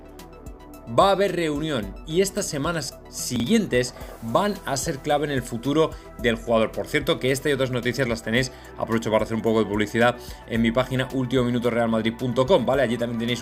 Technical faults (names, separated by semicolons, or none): chunks out of order